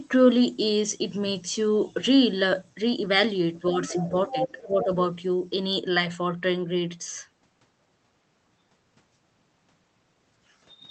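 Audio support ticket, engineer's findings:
Speech suppressed in double talk, 3.81–4.9 s. Talker level dips in patches while a second voice is present, about half a second affected in total, deepest drop a few dB. Likely echo canceller or suppressor: unable to separate near-end talker from loudspeaker echo during overlap, attenuated both.

Other side's voice leaking through, 3.88–4.09 s and 4.29–4.84 s. Second voice audible under talker, first burst about 10 dB down, second stronger at about 5 dB down. Likely residual echo: far end played on device loudspeaker, echo canceller not fully removing it from microphone path.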